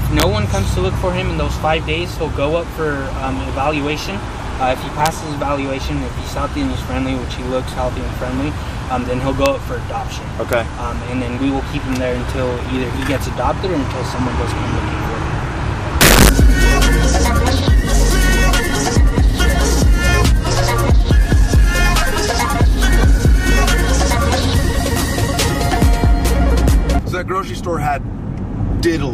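Integer overflow cracks at 0.20 to 0.23 s, 5.06 s, 9.46 s and 16.01 to 16.29 s. Loud peaks ran past the largest value the integer format can hold and wrapped to the opposite sign instead of being limited, so each flips across the full range. The overshoot is about 2 dB, about 0 dB, about 1 dB and about 7 dB. The result is violent snaps, far harsher than clipping, with the last the longest and most severe.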